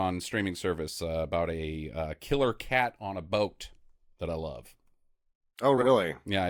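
From 5.77 to 5.88 s, frames out of order: two adjacent runs of frames were decoded in swapped sequence, consistent with blocks of about 40 ms, so that short stretch of speech plays with its halves exchanged. It sounds like a brief garbled flutter, and no time is lost.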